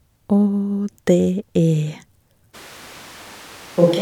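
A switch to a distant microphone at 2.56 s, lasting to the end of this speech clip: the voice abruptly turns roomy and hollow with thinner bass, drops roughly 10 dB, and room noise rises to around 25 dB below the speech, likely because the close microphone's signal was lost.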